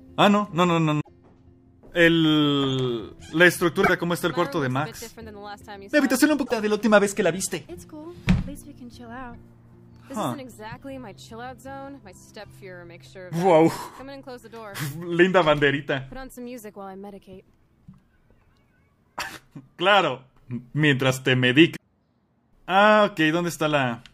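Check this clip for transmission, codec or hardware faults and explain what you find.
Five short glitches break through the audio: at 0.98 to 1.09 s, 3.80 to 3.90 s, 6.42 to 6.52 s, a very brief one at 9.34 s, and 21.72 to 21.82 s. They come from damaged data in a compressed stream. At each point the encoded bytes were corrupted, so the decoder misread those frames, lost its sync and jumped ahead to the next valid frame header.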